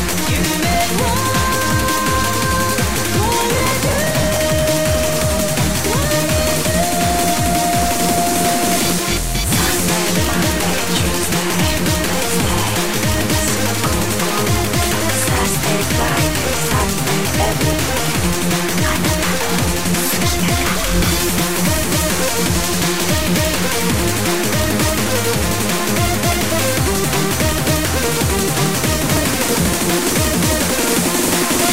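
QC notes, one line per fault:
3.54–4.36 s and 29.06–29.90 s, processor overload crackle: in each span the processor misses dozens of buffer deadlines again and again, and each missed buffer is skipped. That leaves many tiny dropouts with hard edges, heard as a gritty crackling burst that stops once the load eases. The spacing of the clicks fits buffers of a few milliseconds. On the waveform, short flat gaps and abrupt steps appear in each span. On the spectrogram, dense vertical broadband streaks show there.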